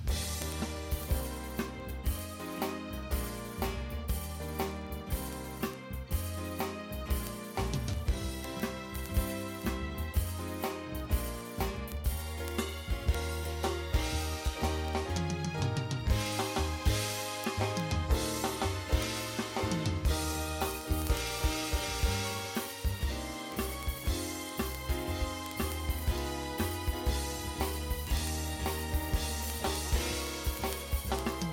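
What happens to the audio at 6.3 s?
A receiving device running on its own clock, unlocked from the sender's, slips a single sample roughly every 50 ms. These word clock ticks are sharp and uneven, and run from 0.11 s to 31.49 s.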